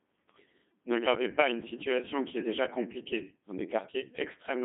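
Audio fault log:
Throughout, Codec 2 vocoder. The speech sounds robotic and buzzy. The decoder rebuilds each stretch from sine waves, driven only by pitch, voicing, energy and a rough spectral shape, so the original waveform never arrives. The damage is heavy. Detail sounds synthetic and smeared, which fits a bitrate near 2.4 kbit/s. The band runs from about 150 Hz to 3.6 kHz, with nothing above 3.8 kHz, so the sound is thin and muffled.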